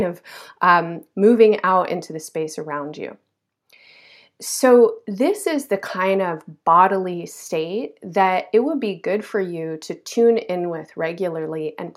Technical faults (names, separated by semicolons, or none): none